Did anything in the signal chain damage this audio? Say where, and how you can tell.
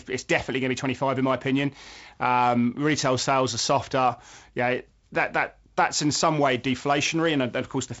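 No, nothing in the signal chain damaged this audio.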